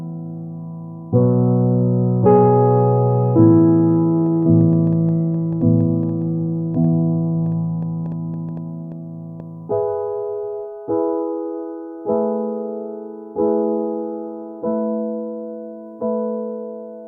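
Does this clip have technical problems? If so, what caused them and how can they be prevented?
Yes. From 4.26 to 9.41 s something is likely injecting short pulses into the path, such as interference from nearby equipment or a faulty connection or power supply. The result is a train of clicks: about thirty similar ticks, roughly 4.9 per second at an uneven pace, reaching about the level of the sound itself and popping through the quieter gaps as well. Keep cables away from noisy equipment and use a stable, properly grounded interface.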